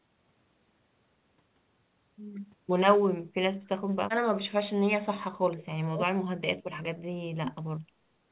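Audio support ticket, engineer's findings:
Echo canceller likely misjudging double talk, treating the near talker as loudspeaker echo and suppressing both: speech suppressed in double talk. Symptom: near-side speech pulled down hard, at worst by about 40 dB, dipping or cutting out. 3.54–4.29 s, most of that stretch affected. Again 4.46–7.7 s, roughly 3 s of the span dipped or cut out. Short recovery between. Audio band-limited near 4 kHz throughout, consistent with a G.711 narrowband call leg.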